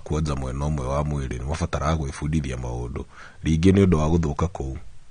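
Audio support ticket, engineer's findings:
Speech dull and smeared for the whole clip, warbly swirl on sibilants, nothing above 9.7 kHz. Likely AAC compression, AAC-LC at a low bitrate, around 32 kbps. Spectrogram shows a hard ceiling at 9.7 kHz.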